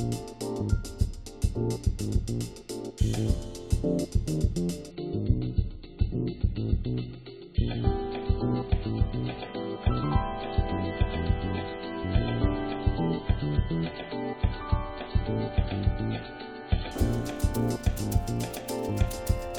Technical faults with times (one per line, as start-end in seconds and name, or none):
4.91-16.91 adaptive stream at a lower bitrate